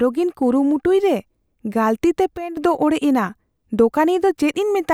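A digital gain setting was likely applied without a ramp, causing a sudden gain jump in this speech: from 2.37 to 2.57 s, speech and background noise drop together by about 11 dB.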